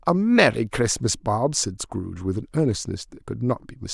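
Nothing in this bit of speech trips me up; I can't hear any technical fault anywhere in it.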